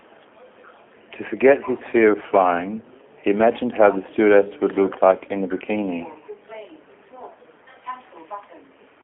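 The speech has been carried end to end through the G.729 codec, its A variant at a rate that fits 8 kbit/s. The codec keeps only a vocal tract filter, a pitch predictor and a few pulses per frame rather than the waveform itself, and the line band sits between about 250 Hz and 3.4 kHz. Throughout, the voice sounds plainly thin, boxy and slightly buzzy and synthetic, with no low body and no crisp top.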